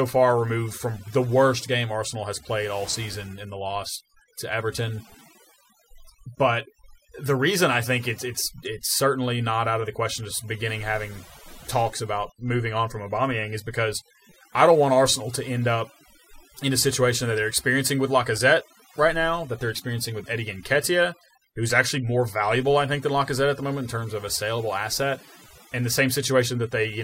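A speech recording suffers from overdone noise removal across its whole length: over-aggressive suppression zeroes any band near the noise estimate, leaving a lowered background with twinkling specks. A spectrogram shows blank gaps scattered with isolated time-frequency dots.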